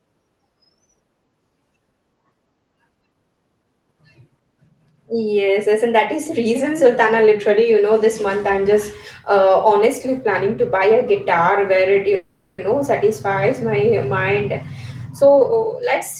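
At 12.15 s the speech stops moving and the last sound hangs on as a fading buzz or hiss for about 0.43 s, until 12.60 s, when it picks up exactly where it left off with nothing lost. This is a call audio freeze: packets were most likely held up in transit, the jitter buffer ran dry, and the receiver stretched the final fragment to cover the wait. The result is an inserted gap that pushes everything after it about 430 ms later.

From 15.21 s to 15.83 s the speech runs noticeably hurried, at roughly one and a half times normal speed, while the pitch stays where it was. This is a jitter buffer speed-up. The buffer was holding more audio than it needed, so the receiver trimmed many tiny pitch-period slices back to back, about a third of a second in total, to catch up. That trimming is what makes the delivery sound rushed. Throughout, the audio has the limited top end of an Opus call path, with nothing above about 12 kHz.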